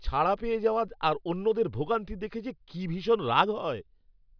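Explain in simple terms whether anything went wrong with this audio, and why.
Nothing stood out as wrong when listening to this speech recording.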